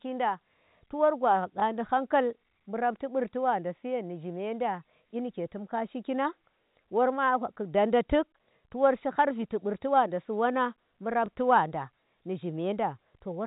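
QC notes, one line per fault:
1.6 s and 11.26 s: packet loss with last packet repeated. Each 20 ms gap replays the previous packet, fitting one lost packet, and the single repeat sounds like a small blip.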